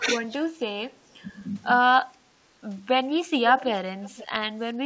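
At 3.56–3.70 s and 4.03–4.27 s, an echo leak brings back faint, roughly 20 dB-down copies of the speech about 0.5 s late, likely from residual loudspeaker echo.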